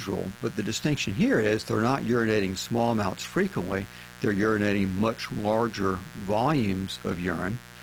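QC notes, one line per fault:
Throughout: mains buzz at 60 Hz, sitting about 20 dB below the speech. Sharp switching spikes twice per mains cycle produce a dense stack of 60 Hz harmonics reaching into the kilohertz range, heard as a steady, raspy buzz under the speech, with Opus coding only lightly affecting it.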